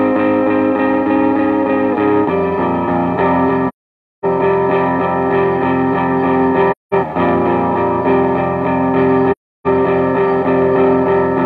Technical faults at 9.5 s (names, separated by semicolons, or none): AAC frame loss with muting